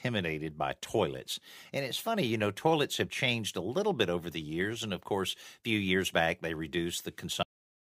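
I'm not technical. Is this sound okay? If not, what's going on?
No. This speech recording has a cut-off end: at 7.43 seconds the sound simply stops mid-way through, and the final 0.4 seconds are dead silence. The last stretch of audio was never saved or played, so the recording ends abruptly. What sets this apart from a natural ending or a deliberate fade-out is that there is no tapering or trailing echo at all. The sound is there one instant and gone the next.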